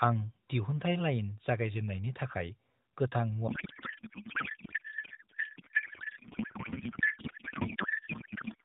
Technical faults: codec payload misread

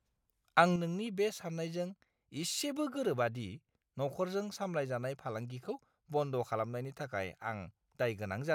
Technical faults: one channel drops out

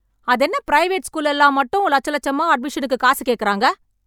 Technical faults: none

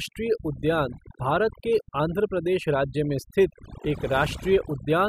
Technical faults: overdone noise removal

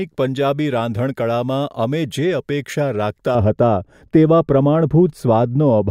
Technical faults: de-emphasis applied wrongly

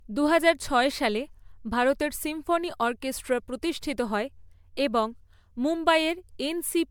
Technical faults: generation loss

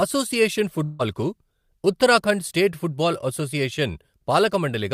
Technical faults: long network dropout

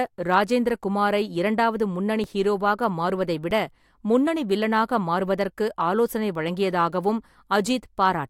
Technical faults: underrun with held sample

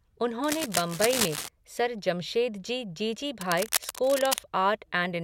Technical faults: cable scratch noise

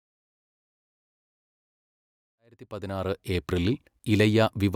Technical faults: none

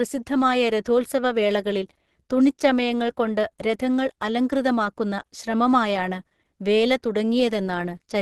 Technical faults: Opus compression

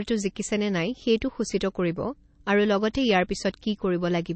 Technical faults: MP3 compression

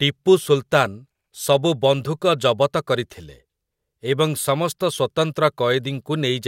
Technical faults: none

